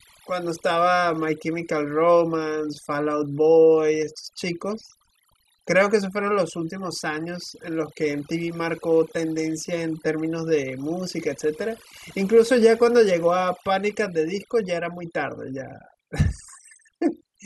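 Overdone noise removal runs through the whole recording. A noise reduction stage was pushed far too hard. It pulls individual frequency bands down, or shuts them off, whenever they sit close to its noise estimate. Quiet parts of the voice fall into that range, so they get cut too. Between phrases, the background drops and breaks up into twinkling specks.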